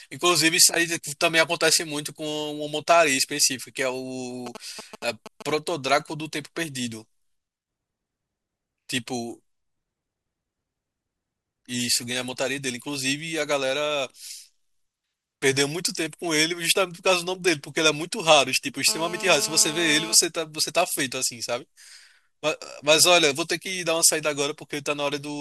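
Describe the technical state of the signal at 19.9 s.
A hard, raspy buzz at 217 Hz, thick with harmonics and about 12 dB below the speech, runs steadily from 18.88 to 20.15 s. It is GSM phone buzz: a nearby 2G phone on a call transmits bursts that the audio circuitry rectifies.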